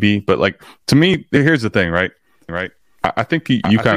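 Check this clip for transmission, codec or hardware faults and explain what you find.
One fault turns up: a doubled audio track from 2.49 s to the end of the clip. The likely cause is the speech being captured a second time through a slower path, or an edit holding two copies out of step, so both get mixed together. A second full-band copy starts abruptly and trails the original by roughly 0.7 s at about 5 dB lower, with no decay or room colouring, so the speech overlaps a clean, slightly quieter repeat of itself.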